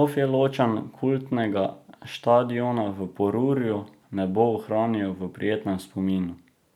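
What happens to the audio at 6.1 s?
At 6.1 s the speech carries on intact, with no dropout, click, distortion or other fault at that moment.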